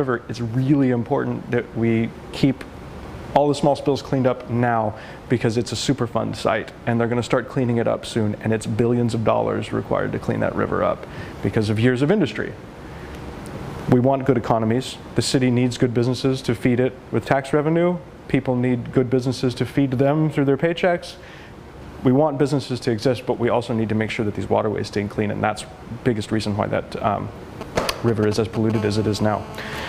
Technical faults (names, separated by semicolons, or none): GSM signalling bursts; GSM phone buzz